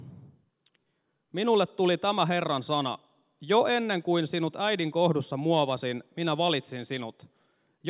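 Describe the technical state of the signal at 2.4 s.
At 2.4 s the speech signal is intact, with no fault present at that moment.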